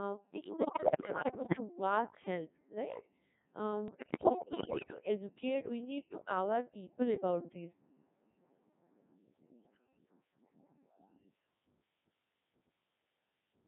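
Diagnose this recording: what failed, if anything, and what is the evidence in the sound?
The failure is at the codec stage. The speech is heavily mangled by a Codec 2 vocoder for the whole clip. It sounds robotic and buzzy, with the heavy damage of a very low rate, which fits about 1.6 kbit/s. Only pitch, voicing, energy and a spectral envelope survive. The decoder rebuilds the voice from sine waves, so the original waveform is gone.

The transmission stage adds bit errors on digital voice radio from 0.57 to 1.60 s and from 3.88 to 4.94 s. In both spans the voice jumps in pitch, level and tone colour and breaks into warbles and gibberish. The error rate sounds high, roughly one bit in five. Each flipped bit corrupts the pitch, level, voicing or spectrum of a whole frame.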